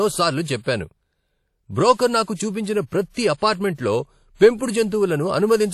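Likely WMA compression at a low bitrate, fitting about 48 kbps, runs throughout the speech: nothing above 14.7 kHz, with plainly audible ringing, washy smear and signal-following hiss.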